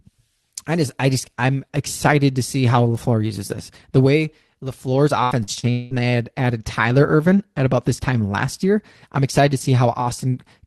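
From 5.23 to 5.94 s, repeated packet loss hits the call stream: four holes open, the longest 0.2 s, and each is patched by extending the preceding sound. About half of this stretch is filled in, so the speech turns choppy, with pieces missing.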